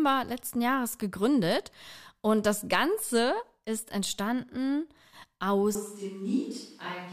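At 5.75 s the speech turns roomy and hollow and stays that way to the end. The bass thins, the level drops by about 5 dB, and room noise rises to roughly 30 dB below the speech. The change is abrupt, likely a switch to a distant microphone.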